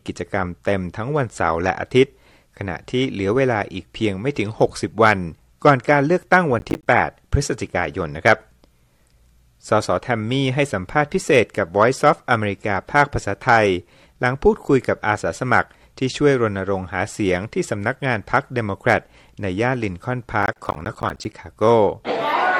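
Processor overload crackle at 6.59–6.86 s and 20.43–21.35 s: missed deadlines on buffers of around 10 ms leave runs of silent gaps, heard as gritty crackling tearing through the sound.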